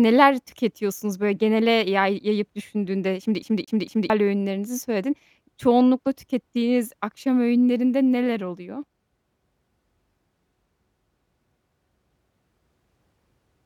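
From 3.42 to 4.10 s the speech gets caught in a CD stuck on one turn. A damaged spot makes the laser jump back to the same point once per rotation. The same slice of about 0.23 s plays three times in a row. A brief mute marks each jump. The result is a quick, mechanical stutter with a perfectly even rhythm. Normal playback returns just before "öğünlerinizi söyledin".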